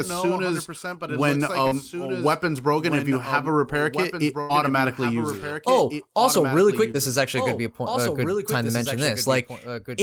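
Speech runs the whole way through with a second full-band copy of itself underneath, roughly 10 dB quieter and trailing by around a second and a half. That's a doubled audio track. The echo has no decay or room colour; it's just the same audio again, out of step. The likely cause is the signal being picked up a second time through a slower path, or an edit leaving two misaligned copies stacked together. Then there are two spots of short concealed packet loss. The first is from 1.67 to 1.73 s, where about 40 ms of audio never arrived and the decoder papered over it with 37 ms of extrapolated sound. The second is from 6.91 to 6.96 s, where about 20 ms was lost and 24 ms was filled. In both, the receiver carried the last bit of sound forward and blended back in, so you get a quick smear or wobble, and anything brief in that window can drop out. The bigger hit is a burst of packet loss from 4.41 to 4.51 s. 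About 80 ms went missing in one go, and the receiver spun out 82 ms of continuation, fading it as the gap went on. You hear a held buzz or a decaying hiss, and then the audio picks up further along with that slice simply gone.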